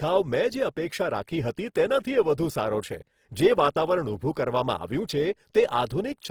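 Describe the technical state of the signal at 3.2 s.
At 3.2 s the speech carries Opus compression damage, and it runs through the whole clip. The grain is plainly audible. Tones sound rough and noisy rather than swirly. Bands starved of bits are filled with folded or noise-like content instead of left empty. The damage is likely from the codec's music mode at a low rate, which fits around 16 kbps. Bandwidth stays full, reaching about 20.4 kHz.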